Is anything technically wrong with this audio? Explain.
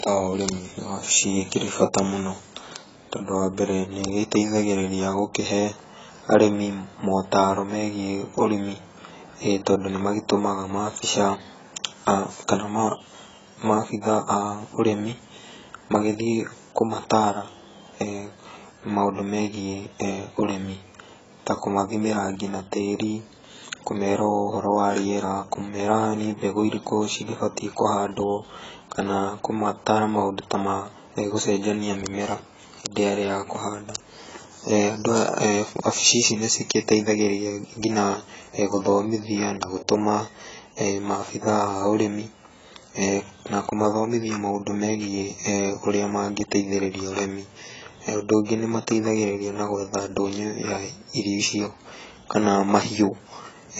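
Yes. Throughout the speech there is heavy damage that sounds like AAC compression, likely at a very low bitrate. Nothing is present above 7.7 kHz, so the sound is dull. Sibilants fizz and smear. Sustained sounds warble. This fits roughly 16 kbps AAC-LC, which quantises frequency lines coarsely and leaves gaps in the spectrum.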